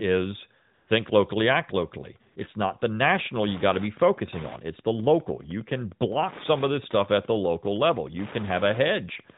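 From 0.74 to 0.88 s, and again from 2.32 to 2.36 s after "locally act locally", AMR comfort noise replaces the background. Speech frames stopped, so a smooth synthetic hiss fills these gaps.

From 3.02 s, just after "not the", to 9.34 s, Wi-Fi interference ticks steadily about ten times a second. A nearby radio's 102.4 ms beacon is rectified, about 20 dB below the speech.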